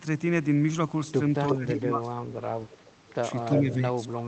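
At 1.47 to 1.55 s a short scrap of the voice comes back about 0.35 s late and nearly as loud as the live speech. This is an echo leak, likely from a far end on loudspeaker whose echo canceller let its microphone pickup through. The same fixed delay recurs at 2.69 to 3.14 s, now faint, and at 3.51 to 3.74 s, loud again. That constant lag is what marks it as echo rather than a dropout.

From 1.53 to 2.37 s, overlapping the first echo, the speech dips by as much as about 25 dB for roughly 0.7 s in total, in chopped pieces. From 3.54 s to the end it sinks again by up to about 20 dB. This is speech suppressed in double talk. It is likely caused by the canceller mistaking the talker for echo while both sides were active. Unlike a network dropout, the loss tracks the overlap and comes in partial ducking rather than clean silence.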